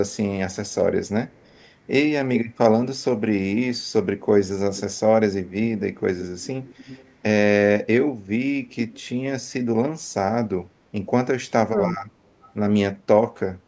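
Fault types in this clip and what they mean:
Echo leak: At 0.12–0.75 s, 1.3–1.68 s, 5.78–7.14 s, 8.92–9.02 s and 12.42–12.53 s, a faint delayed copy of the speech trails behind it. It lags by 227 ms in the first two and 292 ms in the later three. It is quietest early, around 35 to 40 dB below the speech, and loudest at 5.78–7.14 s at roughly 20 dB down. The likely cause is a far-end loudspeaker whose echo canceller let some of its microphone pickup return.
Speech suppressed in double talk: At 2.25–2.58 s and 11.6–12.04 s, the speech suddenly sinks for around a third of a second. The first dip is deep, roughly 35 dB, almost cutting it out. The second is shallower at about 20 dB. This likely happened because both sides spoke at once, and the echo canceller could not tell the talker from the loudspeaker echo, so it pulled both down together.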